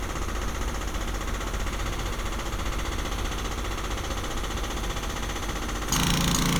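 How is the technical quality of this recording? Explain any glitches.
No technical faults can be heard in this recording of sounds. Nothing in it breaks up, drops out or shifts unexpectedly at any point.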